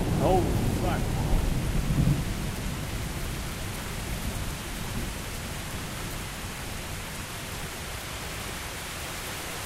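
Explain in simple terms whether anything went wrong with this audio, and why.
At 7.19 s, one Bluetooth LE Audio frame (7.5 ms) was lost, so the receiver patched the gap with a noisy guess. The result is a brief smeared blip.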